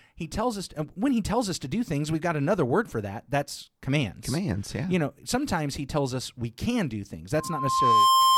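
From 7.37 s to the end at 8.38 s, a loudspeaker feedback squeal takes over the speech. The microphone is picking up the loudspeaker it drives, and at 1 kHz the loop gain has gone above one, so that tone feeds on itself. It swells over roughly three-quarters of a second to a steady whistle about 10 dB above the speech. On a spectrogram this is a single bright horizontal line at 1 kHz that thickens as it grows, and the waveform envelope rises steadily and then levels off before the cut-off.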